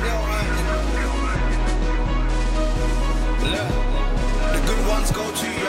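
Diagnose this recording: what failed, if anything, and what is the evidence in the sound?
A Bluetooth SBC bit pool drop, at the codec stage, runs from 1.10 to 2.59 s: treble dulls and gritty quantisation noise rises, then clears. The link congested and the bit pool fell, starving the upper sub-bands, which fits a drop from about 31 to 14, roughly 99 kbps.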